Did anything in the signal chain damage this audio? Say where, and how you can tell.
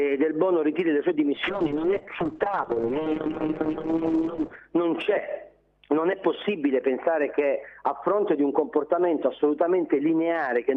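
Yes: a call bitrate drop in the codec from 1.36 to 4.67 s. Audio turns rough and muffled, band-limited to 8 kHz, which fits the encoder falling to about 6 kbps.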